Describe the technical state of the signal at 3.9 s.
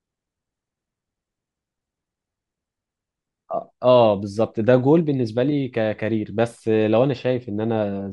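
At 3.9 s the speech signal is intact, with no fault audible at that moment.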